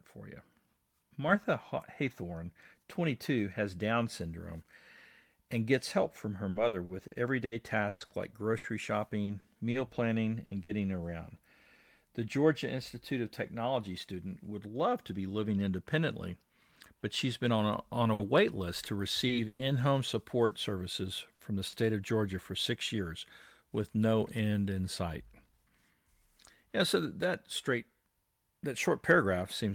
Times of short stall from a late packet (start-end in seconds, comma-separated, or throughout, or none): 18.13-18.22